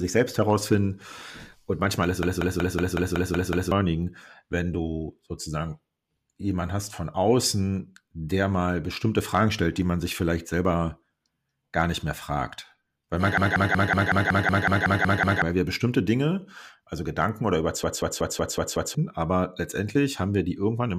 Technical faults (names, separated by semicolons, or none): system hang loop